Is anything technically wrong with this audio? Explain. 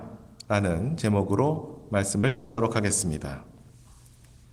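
Yes, there are two kinds of fault, clustered just past the two-second mark.

At 2.19 s and again from 2.21 to 2.24 s, the sound briefly smears and wobbles. This is short concealed packet loss: about 10 ms and then 20 ms of audio arrived too late, and the receiver covered each gap by extending the preceding sound before blending back into the real signal.

From 2.27 to 2.58 s, the audio turns into a drawn-out continuation of the last sound that never falls to silence, then resumes with that stretch missing. The likely cause is a long network dropout: roughly 300 ms never arrived, and concealment filled the entire gap.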